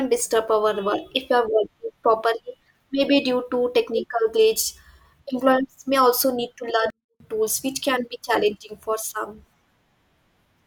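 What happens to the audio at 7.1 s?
At 7.1 s the speech falls into a 24-bit alignment error (too quiet), running from 6.90 to 7.20 s. Samples that sit in the low 24 bits of each 32-bit word are being read as full 32-bit integers, which cuts the level by about 48 dB in a single step. Unlike a dropout, the sound never stops. It stays clean and undistorted, just barely audible, with no fade in or out.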